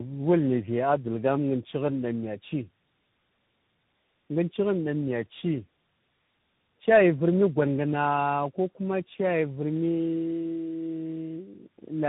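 Throughout this speech clip the voice sounds rough, muffled and warbly, with nothing above 3.8 kHz. This points to tandem speech coding: the call was decoded and re-encoded at each link, likely by three speech codecs in a row, each compounding the previous one's damage.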